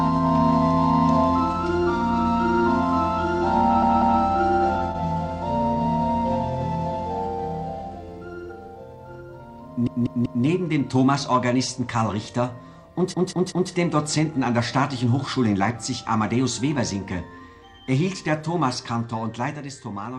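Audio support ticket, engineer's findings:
Repeated frames: a 192 ms run of compressed frames was written or sent again, so the decoder replays it. The result is a stutter at 3.82–4.21 s (two extra plays, 0.38 s added), and at 9.87–10.45 s and 13.14–13.71 s (three extra plays, 0.58 s added each).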